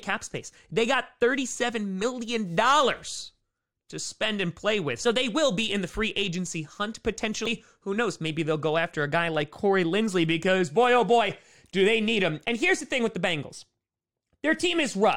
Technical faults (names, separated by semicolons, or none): damaged data in a compressed stream